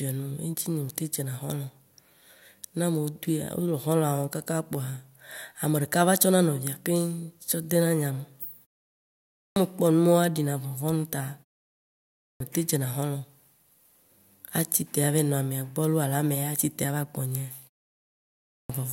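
Clipped start after a pause occurs at 9.18 to 9.56 s, 12.03 to 12.40 s and 18.32 to 18.70 s. After silences of 0.6 to 0.7 s, the output device sleeps and needs about 0.37 to 0.38 s to wake, so speech resumes abruptly with its opening sounds missing.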